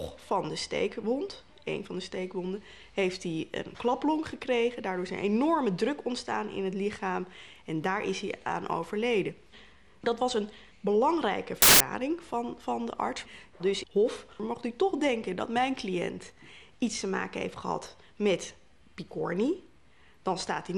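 From 11.62 to 11.80 s the reader assembled each sample from the wrong bytes, off by one or in swapped order, so the rapidly varying low bits landed in the high part of every value. For those 0.18 s the sound becomes a burst of loud, harsh broadband noise.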